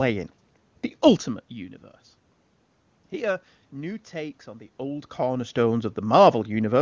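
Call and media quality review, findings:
No faults found in this speech clip. The call microphone processing leaves nothing above 8 kHz, and the talker's level shifts near 1 s and 4.5 s follow movement at the microphone.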